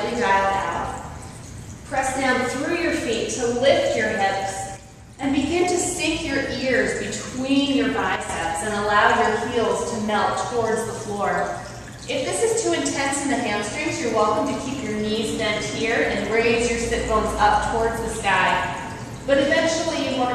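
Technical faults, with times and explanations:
4.77–5.23 s and 8.16–8.29 s, one channel drops out: the sound abruptly falls about 6 dB, then recovers. This is likely one stereo channel briefly lost before the mono sum.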